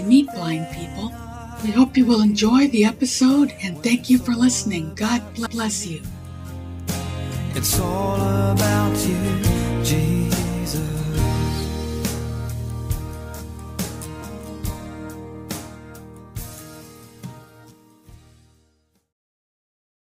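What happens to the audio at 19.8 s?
Nothing goes wrong at 19.8 s; the audio plays through that moment intact, with no dropout, click or distortion.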